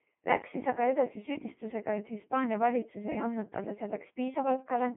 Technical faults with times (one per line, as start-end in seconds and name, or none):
0.00-4.96 Codec 2 vocoder